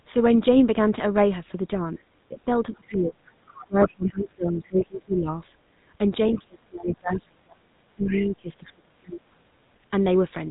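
Throughout, the speech has the buzzy, gravelly roughness of the GSM full-rate codec. Nothing passes above 3.8 kHz. The sound points to the original 13 kbps GSM coder. It rebuilds the voice from a vocal-tract model driven by sparse, regular pulses.

From 1.96 to 3.18 s, the speech is suppressed in double talk. It dips by up to about 25 dB and thins out in patches. The likely cause is an echo canceller turning down both talkers at once.

Inside that stretch, from 2.73 to 2.95 s, the other side's voice leaks through. It is faint, about 20 dB below the speech. The likely cause is loudspeaker sound left behind in the microphone after echo cancellation.

More leakage follows from 3.46 to 4.09 s, about 15 dB down. Suppression returns from 3.66 to 5.28 s, dipping about 25 dB. It hits harder from 6.25 to 7.62 s and 7.96 to 9.51 s, with drops of about 30 dB. A final leak runs from 8.02 to 8.28 s, about 15 dB down.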